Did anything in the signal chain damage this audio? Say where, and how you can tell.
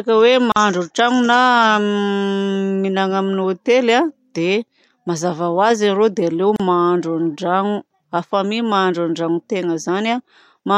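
Yes: a codec-stage gap at a join of encoded pieces. Untrimmed encoder delay and padding open silences of 43 ms at 0.52 s and 34 ms at 6.56 s (after "azy arô dia aleo"), six seconds apart, before the speech resumes where it stopped.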